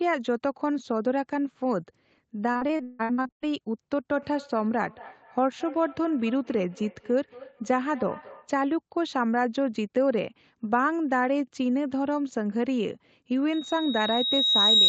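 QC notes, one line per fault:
2.51–3.44 s, repeated packet loss (robotic sound): packets kept going missing or arriving late, with gaps up to 160 ms. Each hole was patched by extending the previous sound, so about 59% of this stretch is concealment, heard as choppy speech with pieces gone.
4.13–8.59 s, feedback echo between two devices: a second device in the room replayed this microphone's signal, and the microphone picked it up again outside any echo canceller's reach. Speech returns at about a fifth of a second, thin and ringing, peaking about 19 dB below the speech.
13.52 s to the end, loudspeaker feedback squeal: the microphone heard the loudspeaker it feeds, and at 3.8 kHz the loop gain passed one. That tone fed on itself, swelling over roughly a second and a half into a squeal around 10 dB above the speech.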